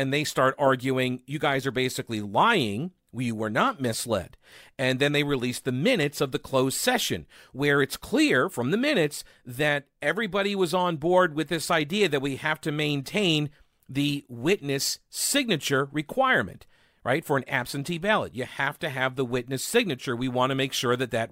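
Speech recording with no audible technical faults anywhere.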